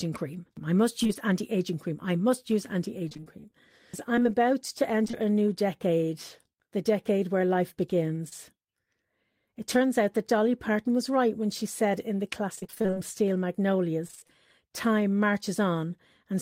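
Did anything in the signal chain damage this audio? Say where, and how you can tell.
Yes. Short concealed packet loss at 1.03–1.07 s and 1.07–1.11 s, then 8.29–8.33 s, is a network-stage fault. Each hole is about 20 ms, bridged by extending the previous sound. It is heard as a brief smear, and a spectrogram shows harmonics running flat before blending back.

Repeated packet loss (robotic sound) is also network-stage, with 11 gaps across 3.09–5.15 s, 11 across 12.55–12.98 s, and 6 across 14.07–14.31 s. Gaps up to about 29 ms suggest lost 20 ms packets. Roughly half the later stretches is concealed, so they sound choppy, with repeating pitch cycles and vertical striping.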